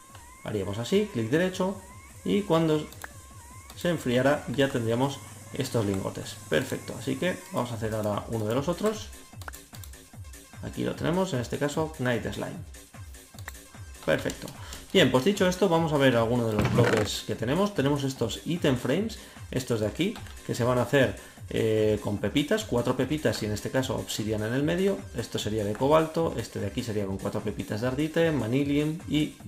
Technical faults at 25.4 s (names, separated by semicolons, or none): loud pop